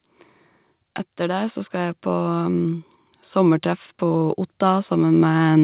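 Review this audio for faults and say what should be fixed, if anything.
From 1.17 s to the end there's automatic gain rising. The AGC hears a quiet input and keeps lifting gain, so speech and background swell together. To prevent it, set a proper input level at the source, or cap the AGC's maximum gain so it can't creep up like that.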